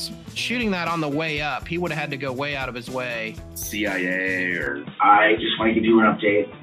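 A short sound recording that changes character abruptly at 4.67 s and stays that way to the end at 6.62 s. From that moment nothing above 3.8 kHz remains, the level shifts by a few decibels, and a faint new background hiss appears, far below the signal. There is no gap at the changeover. The likely cause is the input switching to a poorer device. A plain low-pass filter or codec bandwidth drop would not also change the level and the noise floor at the same instant.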